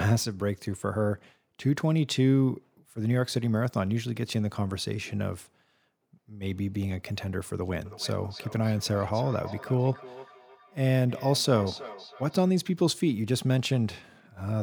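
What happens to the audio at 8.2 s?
Feedback echo between two devices runs from 7.85 to 12.52 s. A second device in the room plays back what this microphone sent, the microphone picks it up again, and its echo canceller ignores sound it didn't play. Speech returns about every 300 ms, thin and ringing, peaking at about 17 dB below the speech.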